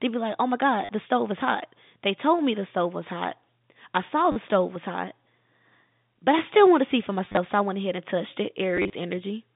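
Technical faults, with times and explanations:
0.85 to 0.89 s, 4.32 to 4.36 s, 7.25 to 7.37 s and 8.77 to 8.93 s, packet loss with last packet repeated: 40 ms gaps, then scattered losses of 70 and 80 ms, are each filled by replaying the previous chunk. The repeats buzz at about 100 Hz, which fits 10 ms packets. A waveform shows identical copied blocks with step discontinuities, and a spectrogram shows vertical click lines and a harmonic comb.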